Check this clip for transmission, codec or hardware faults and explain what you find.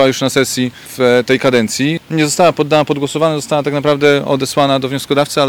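There is one fault, present throughout. Hard clipping, whole clip: the signal is driven about 6 dB past what the stage can pass, so peaks are flattened, adding upper harmonics heard as crackle on loud moments, affecting only around one percent of samples.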